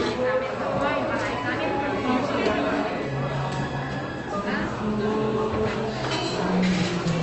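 Nothing stood out on listening; the sound comes across as it would over a normal call connection, with the band limited to about 8 kHz as the codec on that path would give.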